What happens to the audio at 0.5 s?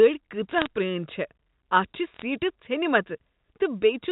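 Bit errors on the digital phone line flip individual bits in the 8-bit mu-law samples, a few in every thousand, from 0.49 to 0.66 s. Each flip corrupts one sample, and hits on sign or high bits jump sharply, so brief crackle of sharp ticks sits over the speech.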